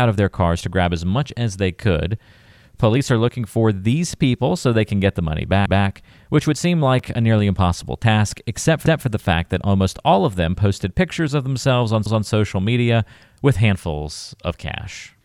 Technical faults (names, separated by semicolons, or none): overlapping chunks; block of digital silence